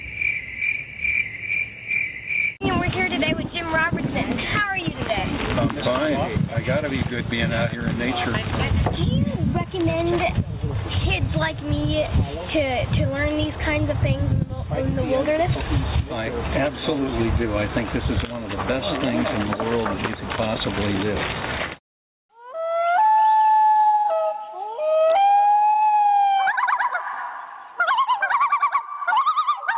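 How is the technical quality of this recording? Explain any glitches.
The recording has one clear fault, gain pumping, which runs through the whole clip. The audio also carries the narrow, telephone-like band of a call path, with nothing above 4 kHz, which fits a 64 kbps G.711 mu-law codec.

Gain pumping is present from start to finish. The level drops sharply under each loud sound, with a swing of roughly 20 dB. The likely cause is input gain set far too high for the microphone, with a fast limiter or compressor clamping the level whenever the signal peaks and releasing it as the sound falls away. Loud and quiet passages end up squeezed close together, so the audio sounds flattened.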